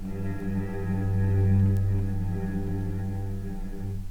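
Two bit error spikes, single-sample ticks at 0.40 s (about -32 dBFS) and 1.77 s (about -20 dBFS). Each is one flipped bit jumping the value and snapping back. Unlike a dropout or edit click, nothing around the tick is lost or shifted.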